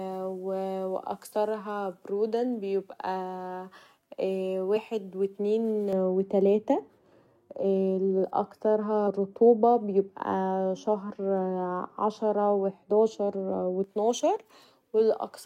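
Compressed frames skipped at 4.76 s, just before "و اتنين", in this speech clip: roughly 40 ms of audio never plays because whole coded frames were lost from the file or rejected by the decoder as corrupt, so playback leaps forward by a whole number of frames. De-emphasis applied wrongly runs from 5.93 s to 13.84 s, beginning after "و اتنين": a treble-cutting filter meant to reverse pre-emphasis acted on audio that either never had that boost or had already been corrected. The result is a smooth downward tilt toward the highs, about 11 dB lower at 10 kHz than at 1 kHz, leaving the speech in that stretch dull and muffled.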